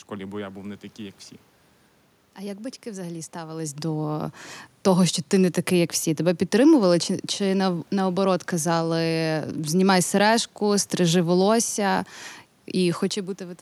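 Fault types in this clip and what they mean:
No system fault can be heard in the recording. A room background sits under the speech, and the talker's level shifts at the microphone a little after the three-second mark and again near the end, as when someone leans back or comes closer.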